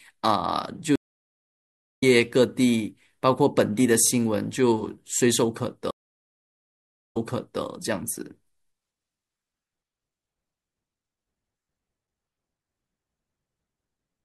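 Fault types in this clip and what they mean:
Stream reconnect: the link dropped, playback went silent, then a new decoder picked up mid-stream. The first gap lasts about 1.01 s and resumes roughly a second later; the second lasts about 1.2 s and resumes 496 ms earlier, replaying sound.
Overlapping chunks: the speech was handled in 2.5 s chunks, each starting before the previous one ended, so 23.22 ms plays twice at every join. This gives brief stutters at 4.07 s, 9.12 s and 11.64 s.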